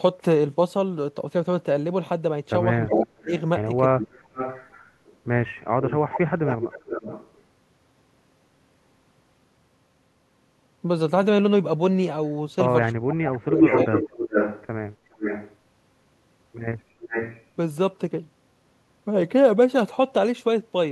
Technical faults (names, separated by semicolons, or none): speech suppressed in double talk; echo leak